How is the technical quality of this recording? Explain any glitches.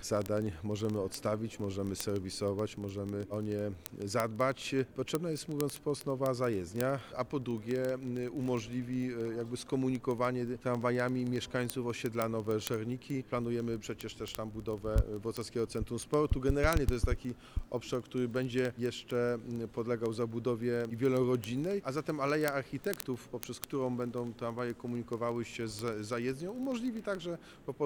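The quality is poor because of a clocking fault that runs through the whole recording. Word clock ticks run from 0.10 s to 27.85 s: an unlocked receiving clock, roughly 0.1% off, slips a sample about every 20 ms, causing sharp, steady ticking.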